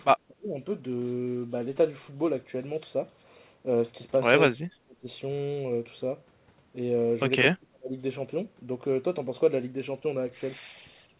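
An echo canceller most likely clamped down during double talk, suppressing the near-end speech while the far side was also talking. The speech in this clip drops steeply, to near silence, from 0.11 to 0.58 s, 4.5 to 5.07 s and 7.49 to 7.96 s, beneath a call band that stops at 4 kHz.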